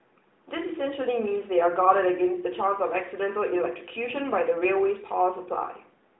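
Nothing stood out on listening to this speech, which is carried over an AMR narrowband mobile codec with a telephone-band sound that stops short of about 3.8 kHz.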